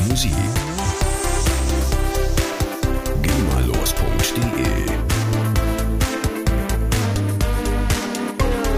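From 7.02 s to the end of the clip, a wrong sample rate sets in. The samples are clocked out slower than they were captured, with no resampling, which fits 48 kHz material being played at 44.1 kHz. Because speed and pitch are tied to that clock, both drop together. The sound runs at about 0.92 times its proper speed and sits roughly 1.5 semitones flat, giving it a slightly dragged, heavier, lowered character for the final stretch.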